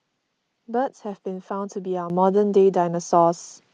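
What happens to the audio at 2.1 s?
At 2.1 s the microphone volume steps up. The level rises by about 8 dB in one abrupt jump rather than a gradual ramp. The call software likely judged the microphone too quiet and raised the device's input volume all at once. Because the change happens before the codec, the speech and the background noise get louder together. The band-limited sound of the call path, capped near 12 kHz, carries the louder level unchanged.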